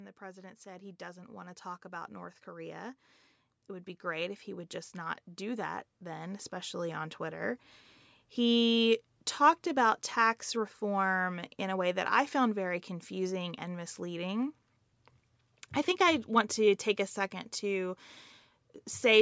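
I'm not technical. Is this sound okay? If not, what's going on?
No. From 0.18 to 3.05 s and again from 3.66 to 7.58 s, voice and background slowly swell louder together. That's automatic gain rising: the call's level control thought the input too quiet and turned it up.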